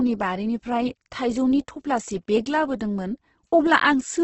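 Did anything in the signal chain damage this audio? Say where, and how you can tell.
Yes. The damage is at the codec stage and runs through the whole speech clip: heavy Opus compression is the likely cause. The voice sounds rough and grainy rather than swirly, because starved bands are filled with folded or noise-like content instead of being left empty. On a spectrogram there is a hard ceiling with nothing above about 8.1 kHz, and the harmonics look smeared and speckled. That pattern fits wideband music-mode coding at a low bitrate around 12 kbps.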